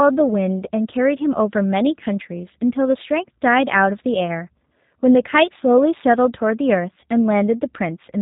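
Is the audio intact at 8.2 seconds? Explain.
No, the speech sounds rough, synthetic and muffled throughout, consistent with G.729 coding, which fits 8 kbit/s: rebuilt from filter and pulse models, nothing above 4 kHz.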